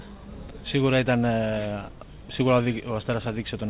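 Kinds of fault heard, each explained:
No kind of fault is present; the audio carries the band limit of a normal call path, with nothing above 4 kHz, which fits narrowband mu-law telephone coding at about 64 kbps.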